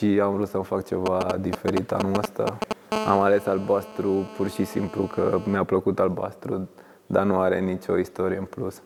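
From 1.06 to 2.73 s the audio carries GSM signalling bursts, a galloping dit-dit-dit of brief 217 Hz buzzes roughly as loud as the sound itself. A nearby 2G phone's intermittent radio bursts are being rectified by the audio circuit. From 2.92 to 5.57 s this becomes GSM phone buzz, a continuous raspy 217 Hz tone rich in harmonics at about 12 dB below the signal. It is steady rather than grouped, because the phone is now transmitting bursts 217 times a second throughout a call.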